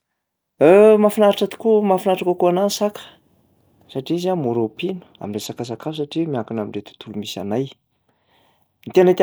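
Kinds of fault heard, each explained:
Bluetooth SBC bit pool drop: from 5.24 to 7.09 s the encoder gets fewer bits, starving the top sub-bands, so treble dulls and gritty grain appears, which fits a drop to roughly 99 kbps.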